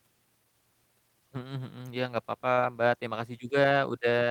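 Short concealed packet loss at 2.53 to 2.59 s, right after "nggak papa": about 40 ms of audio arrived too late to decode, so the receiver extended the preceding sound to bridge the gap and crossfaded back, leaving a brief smeared wobble.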